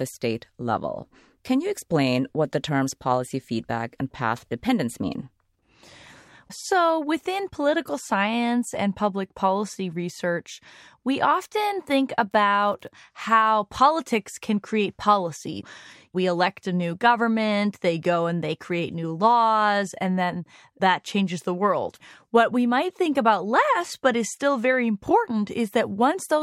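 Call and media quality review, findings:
Unreliable data bit, 12.31–12.88 s: constant crackle/fizz over the speech, persisting through gaps. One marginal data line flips its bit on random samples, each error an identical-height spike. Waveform: uniform spikes scattered across the segment; spectrogram: broadband speckle, pauses included.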